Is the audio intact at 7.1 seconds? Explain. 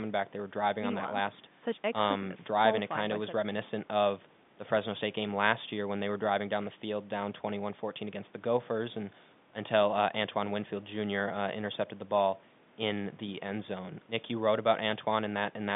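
Yes, the speech is intact at 7.1 s, carried cleanly over the G.711 telephone line.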